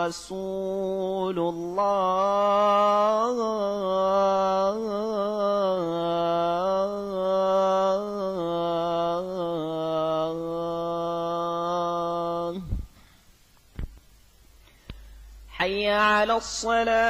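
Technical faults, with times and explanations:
3.69 to 5.88 s, repeated stalls (stutter): the sound catches and drags through 26 brief gaps, the longest about 15 ms, each bridged by continuing the last sound because packets arrived late and the buffer kept running dry. Nothing is lost, but the flow jerks rather than slowing evenly.
5.90 to 8.25 s, jitter buffer slow-down: playback runs at 89% speed while pitch stays put, as the receiver repeats single pitch periods to rebuild its reserve, adding 275 ms. Unlike the stutter, the stretching is smooth and continuous, drawing sounds out.
10.01 to 12.38 s, jitter buffer speed-up: the audio hurries at 111% speed with unchanged pitch, since the receiver trimmed short pitch-period pieces, roughly 0.3 s in total, to shed an excess of buffered audio. It is the mirror of the slow-down, compressing rather than stretching.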